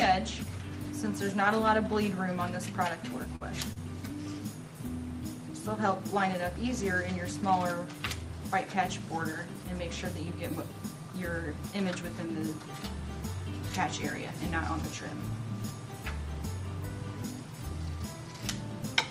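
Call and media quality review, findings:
Short stall from a late packet, 3.36–3.44 s: sound held too long, slight buzz. Jitter buffer ran empty waiting on a late packet; receiver stretched the last sound for about 49 ms, then resumed where it left off. Nothing lost, but playout delay grew by 49 ms.

Short concealed packet loss, 3.73–3.79 s: brief smear or wobble, about 40 ms of sound absent. Packets missed the decoder deadline; concealment extended the preceding sound for about 30 ms and blended back into real audio.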